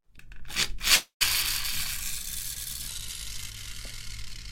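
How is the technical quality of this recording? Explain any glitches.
The quality takes three separate hits, all after about the first second of a short piece of audio.

From 0.95 to 1.23 s there's a long network dropout, likely from a stretch of packets that never arrived. About 260 ms of sound is missing. The receiver tries to paper over it by extending what it last had, so you hear the sound drag on as a fading buzzy tail, and then roughly 120 ms of dead air before the audio picks up again further along, with that chunk simply gone.

At 2.55 s there's a short concealed packet loss. Only about 20 ms failed to reach the decoder in time, and the concealment patched it by carrying the previous sound forward for a moment and then blending back in. It's quick, so it comes across as a tiny smear or wobble rather than a gap.

From 2.88 s to the end, the section is at the wrong speed: it plays at about 0.865 times the original rate. 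That's most likely a clock mismatch in whatever played or edited that stretch. Because speed and pitch move together, everything there drops by roughly three semitones and sounds slower and heavier, with the change arriving abruptly rather than drifting in.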